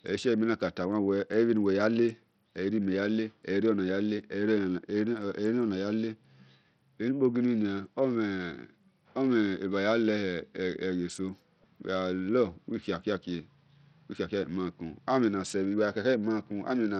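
From start to finish the speech sounds gritty, with flickering treble and nothing above 17 kHz, likely heavy Bluetooth SBC compression, which fits a starved bitrate around 64 kbps.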